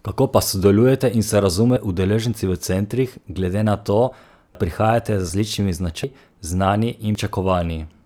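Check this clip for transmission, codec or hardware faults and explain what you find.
Five jumps in the speech at 1.77, 4.55, 5.29, 6.04 and 7.15 s. This is likely a dropped buffer (overrun): samples were overwritten before being read, so the audio skips ahead with no silence, losing roughly a tenth to a third of a second each time.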